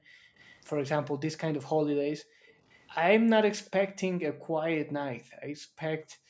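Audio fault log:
0.00–0.35, 2.21–2.59, 4.32–4.55, 5.15–5.80, 6.05 to end: background gated by the echo canceller. Room sound suddenly ducks, by about 26 dB at first and about 40 dB later, because the canceller clamps the microphone while the loudspeaker plays.
0.39–0.58, 2.71–2.84, 3.65–3.70: echo leak. A very faint repeat of the speech trails about 250 ms behind, likely from loudspeaker sound the far end's echo canceller failed to remove.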